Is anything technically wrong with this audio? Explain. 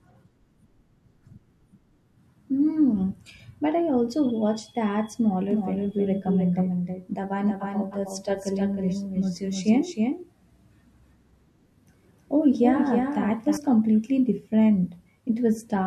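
Yes. From 5.51 to 13.57 s, a doubled audio track appears. A second copy trails by about 300 ms, some 5 dB quieter. It likely comes from a slower capture path.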